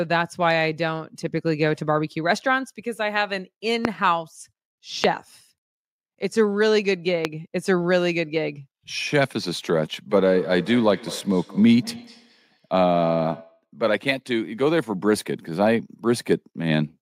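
Loud pops hit at 3.85 s, 5.04 s and 7.25 s, each a single sharp pulse roughly 20 dB above the speech, which carries on underneath. These are likely voltage transients from a plug, switch or static, not clipping.

From 10.25 s to 13.67 s comes a feedback echo between two devices: speech returns about every 200 ms, thinner and ringing, peaking about 17 dB below the speech. Unlike room reverb, the repeats arrive at fixed, evenly spaced intervals.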